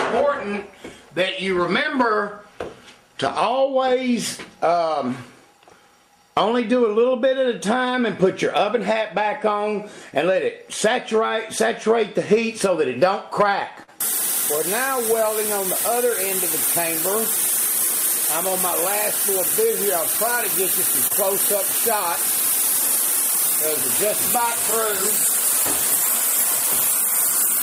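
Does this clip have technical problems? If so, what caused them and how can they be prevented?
Yes, there are two short stalls from a late packet, at 13.83 to 13.90 s and 21.07 to 21.12 s. Each time the jitter buffer ran dry, so the receiver stretched the last bit of sound, 45 ms and then 28 ms, and resumed where it left off with nothing lost, just shifted later. A deeper or adaptive jitter buffer on a less congested network path would prevent this.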